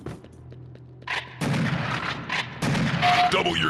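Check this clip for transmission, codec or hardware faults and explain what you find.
No transmission, codec or hardware faults turn up in this clip. It has been through a WebRTC call path using Opus, and the upper band stops at about 12 kHz, which fits a setting of roughly 32 kbps.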